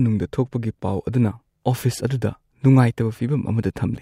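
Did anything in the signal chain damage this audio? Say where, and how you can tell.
No, nothing in the chain damaged it.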